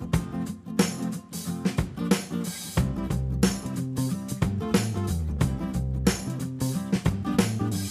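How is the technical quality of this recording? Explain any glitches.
No glitches are audible anywhere in the recording, and nothing needs explaining.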